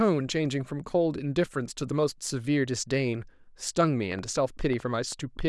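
From about 4.12 s to 5.42 s there's a train of clicks riding over the speech: roughly seven sharp, similar-shaped ticks at around 5.4 per second, spaced unevenly rather than like a steady metronome. They poke out a few dB above the speech itself, and they keep going through any gaps. Something is injecting short pulses into the signal, likely interference from nearby gear or a faulty connection or power supply.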